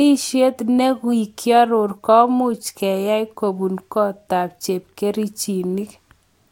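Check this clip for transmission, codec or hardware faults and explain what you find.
No transmission, codec or hardware fault can be heard in this speech recording. There is nothing to report.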